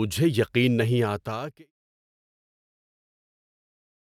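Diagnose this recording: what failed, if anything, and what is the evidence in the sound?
Nothing failed in this recording, and the sound gives no evidence of a fault; the speech simply fades out smoothly from around 1 s to 1.72 s.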